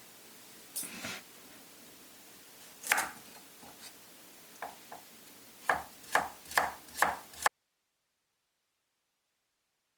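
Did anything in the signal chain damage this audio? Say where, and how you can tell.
Yes. From 7.48 s to the end there is an audio dropout to a faint residue: the sound cuts off abruptly, leaving only hiss about 45 dB down. The live noise floor, rather than digital silence or a gradual fade, points to a likely broken upstream connection with the later chain still running.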